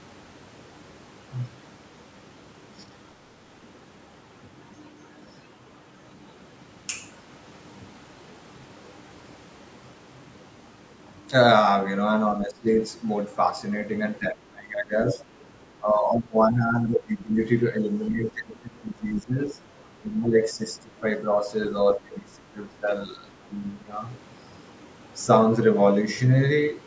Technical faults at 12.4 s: speech suppressed in double talk

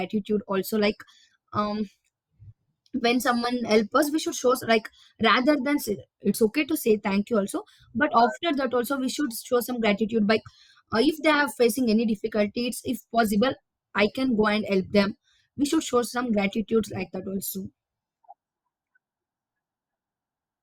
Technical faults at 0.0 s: none

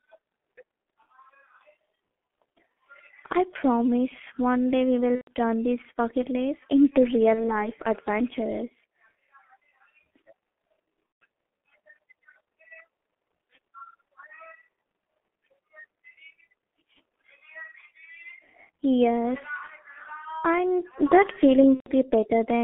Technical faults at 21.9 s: G.723.1 codec; VoIP packet loss concealed by the speech codec

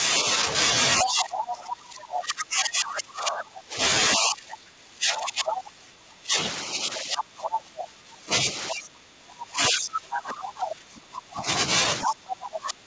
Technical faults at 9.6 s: speech suppressed in double talk

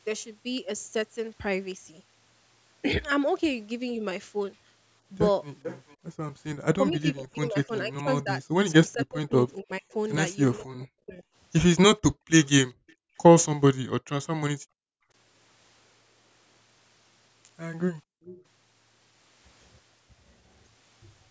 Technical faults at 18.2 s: background gated by the echo canceller; echo leak

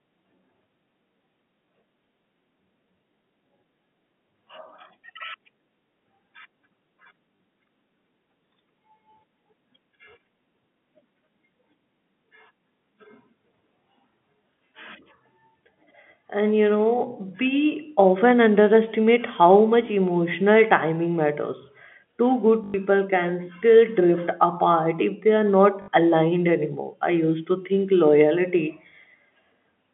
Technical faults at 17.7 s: none

